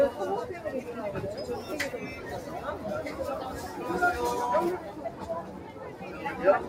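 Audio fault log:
throughout: noise suppressor applied to music or sounds, which treats sustained tones and ambience as noise, letting attacks through while tails sink, swinging level by about 5 dB.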